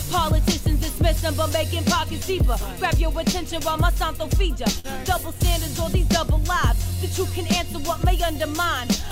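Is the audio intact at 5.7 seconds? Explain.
Yes, the audio is intact at 5.7 seconds, with no dropout, click, distortion or other fault at that moment.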